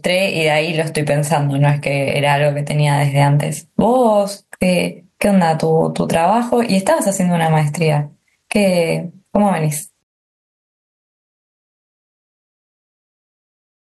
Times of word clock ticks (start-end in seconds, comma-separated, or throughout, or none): none